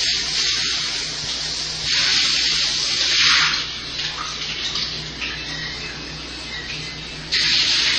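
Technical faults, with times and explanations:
Throughout, transcoding between lossy codecs: nothing above 8.3 kHz, and two kinds of smeary, swirling artefacts stack together, likely low-rate MP3 re-encoded as low-rate HE-AAC.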